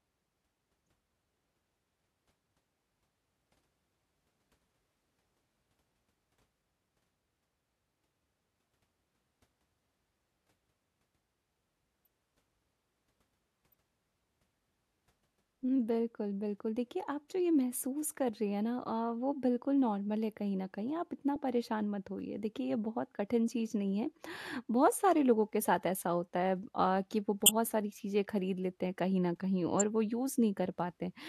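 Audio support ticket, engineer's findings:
Corrupt frame decoded: bit errors in compressed frames played through by decoder, misplacing spectral energy for a frame or so. Brief chirp or noise bursts at 12.05–12.08, 13.72–13.75, 21.36, 27.46–27.49 and 29.80 s, varying in level.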